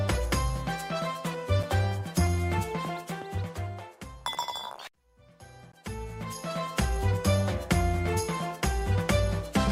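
The audio has two blocks of digital silence, at 1.63 s and 5.72 s, lasting about 5.3 ms and 16 ms. The signal drops abruptly to silence and returns with no fade; the first gap is heard as a tick, the second as a short hole. The first gap fits a 256-sample buffer left unfilled in time.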